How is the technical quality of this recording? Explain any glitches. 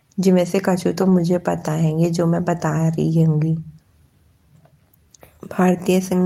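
One glitch stands out. From 1.01 to 1.19 s, a lost packet rebuilt from error correction: low-bitrate copies fill the gap, sounding rougher and noisier but unbroken, unlike concealment's smeared dropout.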